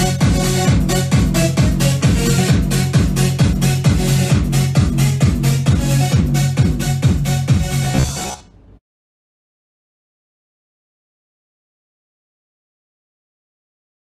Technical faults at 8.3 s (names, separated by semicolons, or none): robotic sound from repeated short buffers